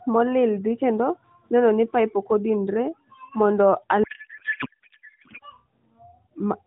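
A codec payload misread runs from 4.04 to 5.43 s, just after "pipe ok odinre mondo". Octet-aligned AMR frames are being unpacked as bandwidth-efficient, shifting every field, so the band-limited AMR narrowband speech collapses into garbled noise and warble that barely tracks it.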